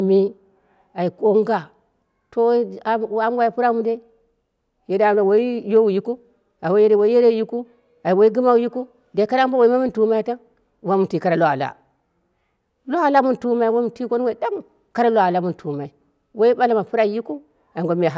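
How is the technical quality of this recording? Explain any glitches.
No glitches or dropouts can be heard anywhere in the recording, and there is nothing to report.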